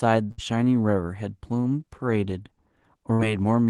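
Speech over a call line, with the top end rolled off around 12 kHz by the codec, and two bursts of packet loss: one at 0.31 to 0.41 s, one at 3.14 to 3.22 s. In each, a run of packets went missing, so the receiver stretched the last bit of sound for about 60 ms (63 and 53 ms), fading it into a held buzz or hiss, then jumped ahead with about 60 ms of the speech simply gone.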